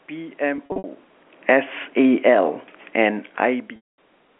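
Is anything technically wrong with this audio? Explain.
Yes. From 0.56 to 0.84 s, packet loss with pitch repetition: about 160 ms dropped in short bursts, the receiver looping the last pitch period, so the speech turns briefly held and buzzy.

From 1.34 to 2.44 s, automatic gain falling: the gain control judged the input too loud or its background noise too strong and eased down about 4 dB, so the speech and room noise sink together.

From 3.76 to 3.98 s, packet loss again: a 220 ms gap, and the repeated pitch period fades toward silence before the speech cross-fades back in.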